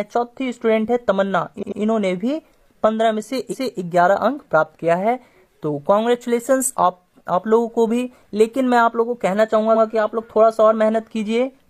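The audio stutters three times from repeated frames: a 93 ms block plays twice more at 1.58–1.77 s, a 279 ms block plays once more at 3.49–3.77 s, and a 93 ms block plays once more at 9.71–9.80 s. Compressed frames were written or sent more than once, which adds about 0.56 s in total.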